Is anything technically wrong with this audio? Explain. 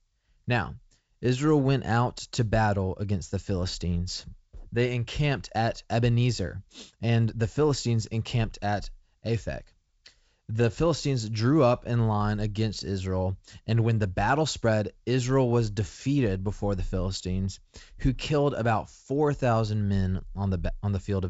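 No technical faults are audible.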